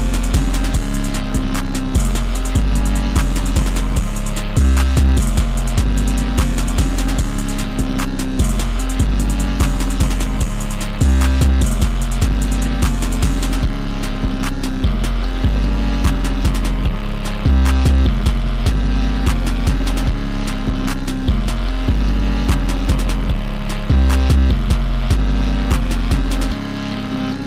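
Nothing here calls for comment, as the audio runs along without a single technical fault showing up anywhere in it.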